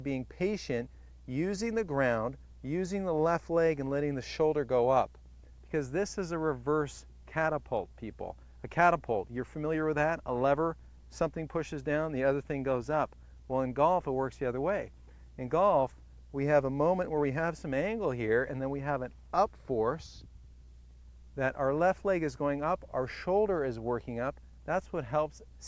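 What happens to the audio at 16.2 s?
Nothing goes wrong at 16.2 s; the audio there plays through intact, with no dropout, click, distortion or other fault.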